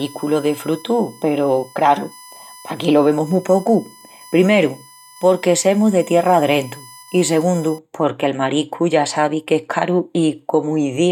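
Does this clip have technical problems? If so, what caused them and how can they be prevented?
Yes. A USB whine, a fixed 1 kHz tone roughly 25 dB below the speech, runs from 0.0 to 7.78 s. Current drawn in 1 ms bus frames leaks through power or ground. Unlike mains hum, it sits well above 50 or 60 Hz. Prevent it with a powered hub, a ground-loop isolator or a separately powered interface.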